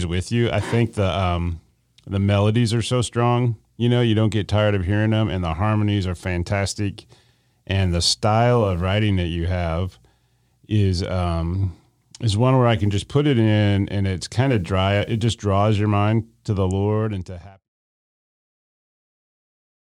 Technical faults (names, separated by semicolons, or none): none